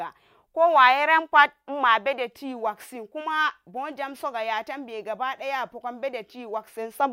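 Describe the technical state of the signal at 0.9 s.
At 0.9 s the speech signal is intact, with no audible fault at that point.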